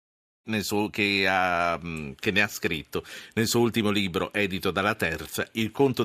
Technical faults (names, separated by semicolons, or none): none